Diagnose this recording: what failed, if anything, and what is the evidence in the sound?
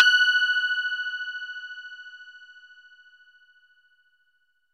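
Nothing in the recording points to a failure at any stage of the chain. No audible event in the sound marks a problem, so there is no evidence to trace to a mechanism.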